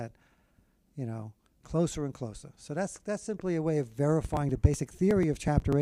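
From 4.25 s to 5.73 s there's a run of periodic USB or driver dropouts: every 0.123 s a couple of milliseconds just get skipped, around fifteen times, so you hear evenly spaced ticks, as if something stalls the bus or driver on a timer.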